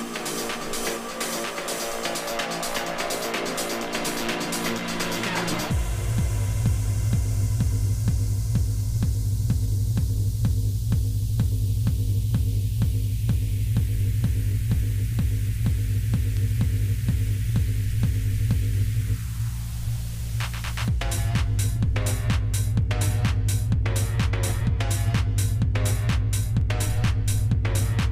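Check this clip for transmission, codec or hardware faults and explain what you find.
No faults can be heard anywhere in the clip. There is nothing in it that calls for further explanation.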